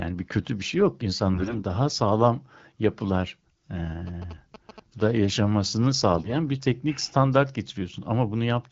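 From 1.34 to 1.63 s the speech turns hoarse and gargly. These are AMR bit errors. The weaker bits of each coded frame arrive flipped, but the frame still passes its check. So the decoder places its excitation pulses wrongly and gets the fine pitch, gain and spectrum values off. Pitch and loudness hold roughly steady while the texture goes scratchy. The error rate here is heavy, so the damage is strong.

From 4.07 to 5.18 s come GSM signalling bursts. A nearby 2G phone is exchanging short groups of radio bursts with the network, and the audio circuit rectifies them. The result is a galloping dit-dit-dit of brief buzzes at 217 Hz. It sits about 15 dB below the speech.

From 6.16 to 6.37 s the AMR bit errors return. This time the error rate is much lower. The scratchiness is brief and milder than the first burst.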